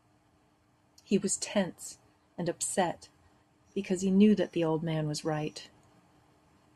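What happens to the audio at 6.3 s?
Nothing goes wrong at 6.3 s; the speech there plays through intact, with no fault to be heard at that moment.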